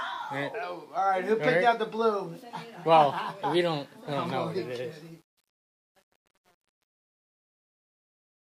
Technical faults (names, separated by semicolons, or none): truncation distortion on a fade